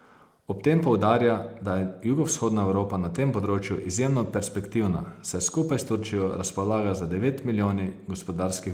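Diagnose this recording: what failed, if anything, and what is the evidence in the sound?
No faults detected.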